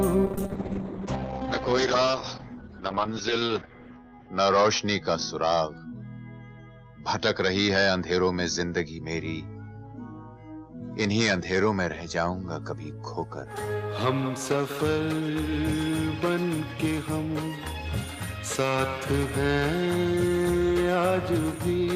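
From 0.31 to 12.67 s, a call bitrate drop to 8 kbps leaves audio muffled, rough and capped at 6 kHz, gapless, unlike packet loss.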